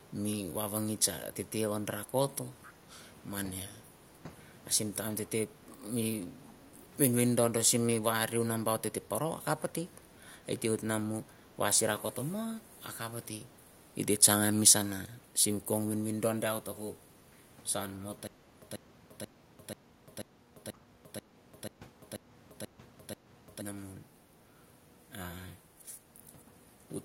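Echo leak at 2.62 to 2.72 s: a faint delayed copy of the speech, well below the main voice, arrives about 494 ms late as a brief scrap. The likely cause is a far-end loudspeaker whose echo canceller let part of its microphone pickup return down the line.

Stutter with silent gaps from 18.27 to 23.62 s: the same 138 ms burst repeats 11 times, each followed by about 348 ms of digital silence, every 486 ms. This is likely a stalled stream replaying its last fragment at each retry, so the speech that belonged there is lost.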